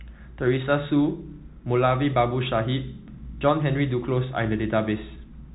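From start to finish the speech carries Bluetooth CVSD headset codec damage: nothing passes above about 3.8 kHz, s sounds turn scratchy, and a granular hiss sits underneath, consistent with a 64 kbps one-bit delta stream whose step lags loud highs. A spectrogram shows a flat ceiling.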